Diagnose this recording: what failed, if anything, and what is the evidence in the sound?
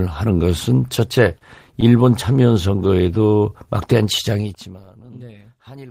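Repeated stalls (stutter) between 0.95 and 1.93 s point to the network and jitter buffer stage. Packets arrived late, the buffer kept running dry, and the receiver stretched the last sound across ten short holes, about 112 ms in all and none longer than 29 ms, so about 12% of that stretch is filled-in audio. Nothing is lost, which separates this from packet loss: the sound hiccups and drags rather than dropping out.

A jitter buffer slow-down follows from 2.87 to 3.68 s, again at the buffer stage. To rebuild its reserve, the receiver repeated single pitch periods, adding about 104 ms and running that passage at 88% speed. The pitch stays put while sounds are drawn out, sometimes with a faint warble. That separates it from a clock or sample-rate error, which would lower the pitch along with the speed, and from the stutter, which is choppy rather than evenly stretched.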